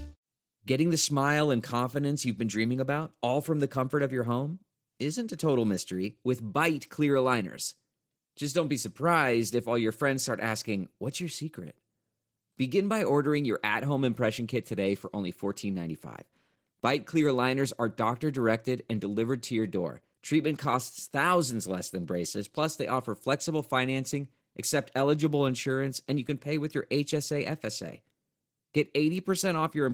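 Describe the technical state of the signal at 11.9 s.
At 11.9 s you're hearing Opus voice compression, which runs through the whole clip. The speech has that hoarse, slightly robotic edge of a coarsely coded excitation, consistent with hybrid mode (SILK below 8 kHz, CELT on top) at roughly 16 kbps.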